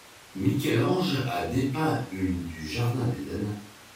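Nothing in the recording stands out as a technical fault, so there's nothing to flag here.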